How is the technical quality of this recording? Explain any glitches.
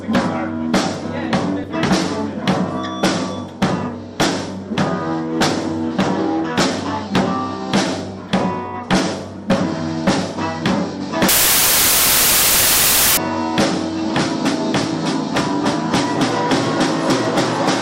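A burst of loud, harsh broadband noise spoils the recording from 11.29 to 13.17 s, nearly two seconds of samples built from the wrong bytes. The reader misassembled each sample's bytes there, so the rapidly changing low-order bits landed in the most significant position and became loud noise. A spectrogram shows a wideband block across the frequencies, and the waveform turns dense and jagged.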